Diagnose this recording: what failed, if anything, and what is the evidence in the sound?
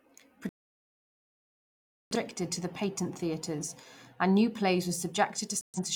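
The speech shows a digital broadcast dropout, a failure in the transmission path to the receiver. The sound mutes from 0.49 to 2.16 s, about 1.7 s of silence. It returns at "to the patent theatres". A second, shorter hole runs from 5.61 to 5.79 s. The receiver stopped getting valid frames and muted its output until clean ones arrived. The long gap fits a few dozen lost frames. Whatever was broadcast during both gaps is gone.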